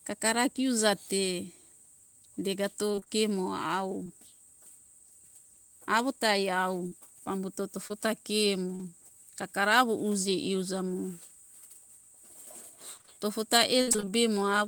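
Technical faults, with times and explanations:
2.91 to 4.11 s, repeated packet loss (robotic sound): six audio packets went missing in quick succession, and the receiver covered each hole by stretching the sound just before it, about 120 ms of patching in all, the longest single hole 24 ms. Because roughly a tenth of this stretch is synthetic continuation arriving gap after gap, the speech turns choppy, with small pieces of it dropping out.
6.87 to 8.81 s, scattered short gaps: a handful of packets, around four, were lost or late at separate moments rather than in a cluster, together taking out 120 ms. Each hole, the biggest around 40 ms, was bridged by carrying the previous sound forward, covering only a small share of the stretch. The speech stays clear, but brief ticks, smeared syllables and small hiccups appear where the patches fall.
12.97 to 14.10 s, repeated packet loss (robotic sound): nine packets dropped in a dense run, leaving 220 ms missing and about 215 ms of filled-in sound, with the longest hole 59 ms. 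With nearly a fifth of this stretch made up of repeated, extended sound, the speech breaks up into a stuttering, choppy texture with audible chunks gone, more severe than the earlier burst.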